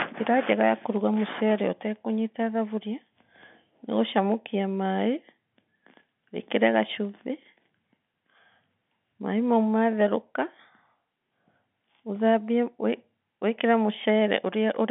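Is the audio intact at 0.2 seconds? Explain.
Yes, the audio is intact at 0.2 seconds, carried through the G.711 telephone coding, which keeps nothing above about 3.7 kHz at this point.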